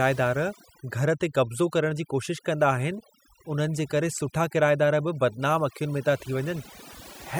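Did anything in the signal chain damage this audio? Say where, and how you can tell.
Yes. Throughout the speech, the pauses collapse into near silence dotted with twinkling specks, and the voice comes across as if its quieter edges have been shaved away. That is overdone noise removal at the processing stage: a noise reduction tool set far too strong has been pulling individual frequency bands down or shutting them off whenever they sit close to its noise estimate, taking the softer parts of the voice with them.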